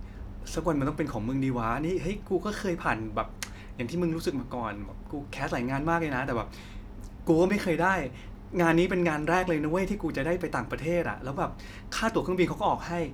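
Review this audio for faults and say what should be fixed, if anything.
Nothing in the signal needs fixing, since no technical faults can be heard anywhere in the recording.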